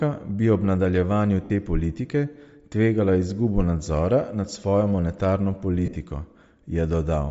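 The whole clip has a breathy, grainy edge with thin, noise-filled highs, which points to Bluetooth LC3 compression, likely at around 32 kbps with 10 ms frames. At 1.44 to 1.50 s, about 60 ms of LE Audio frames were lost. The decoder repeats the last spectrum as a smeared, noisy patch. Another 80 ms of losses are scattered across 5.86 to 5.96 s, with the longest gap around 40 ms.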